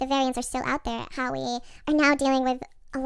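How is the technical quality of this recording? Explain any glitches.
The speech runs fast and high from start to finish, the result of a wrong sample rate. Across the whole clip the speech plays about 1.5 times too quickly and sits roughly seven semitones (a perfect fifth) above where it should. That combination fits audio recorded at 16 kHz being played back at 24 kHz with no rate conversion. Because the samples are simply read out faster, pitch and tempo rise together by the same 1.5 ratio, giving the chipmunk-like, hurried quality.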